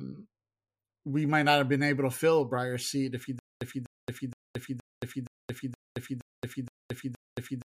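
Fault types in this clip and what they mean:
Stutter with silent gaps: from 3.39 s to the end, the same 0.25 s fragment of speech repeats nine times at an even 0.47 s period, each separated by about 0.22 s of digital silence, likely a stalled stream replaying its last chunk. Unlike a plain loop or dropout, burst and silence alternate strictly.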